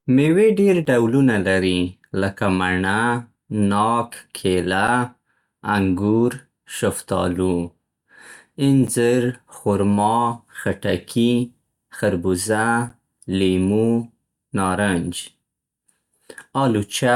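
Speech clip with a gap between stream segments: successive 4-second segment timestamps leave small gaps that the player fills with silence, producing hard-edged dropouts of roughly 7 to 13 ms at 0.85 s (after "مېوې ډېر", before "ډولونه لري لکه"), 4.88 s (after "ناک کیله"), 8.87 s and 12.89 s.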